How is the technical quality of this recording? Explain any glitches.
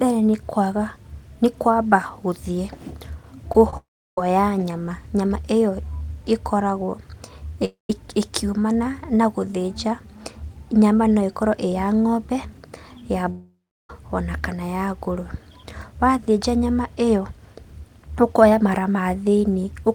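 The recording has clear network transmission faults: two brief concealed gaps and three longer interruptions where the speech goes missing.

Short concealed packet loss occurs at 3.52–3.55 s and 3.70–3.73 s. Each time about 20 ms of audio arrived too late, and the receiver filled it by extending the preceding sound before rejoining the real signal. The result is a quick smear or wobble in the speech.

At 3.77–4.18 s, 7.65–7.90 s and 13.3–13.9 s the speech cuts out for 0.24 to 0.59 s, most likely from a long network dropout. A fading continuation of the last sound is followed by silence of about 0.15 to 0.33 s. The speech then resumes with that stretch lost.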